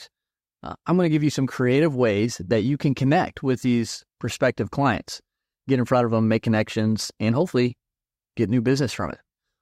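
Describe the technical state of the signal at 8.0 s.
At 8.0 s the speech signal is intact, with no audible technical fault at that moment.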